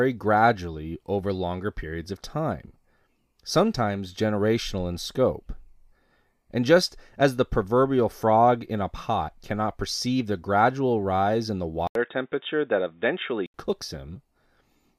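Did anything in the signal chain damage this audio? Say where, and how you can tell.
Yes. After "gradual rise in the", the speech goes dull from 11.87 to 13.54 s, with nothing above 3.8 kHz, a faint new noise floor and an 80 ms silence at the switch. This is likely an input switched to a poorer device at the driver stage; the gap and changed noise distinguish it from a codec bandwidth drop.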